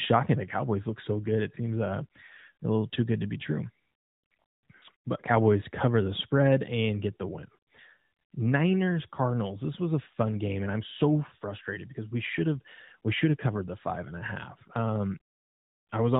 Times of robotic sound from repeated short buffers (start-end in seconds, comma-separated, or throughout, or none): none